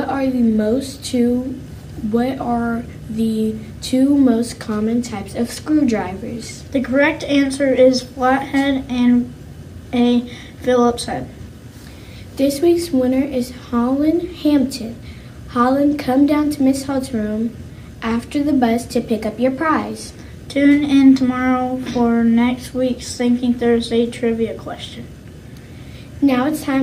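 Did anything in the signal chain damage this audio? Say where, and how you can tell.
No, nothing in the signal chain has left an audible mark on this audio, and every stage from capture through to playback appears to have passed the signal on intact.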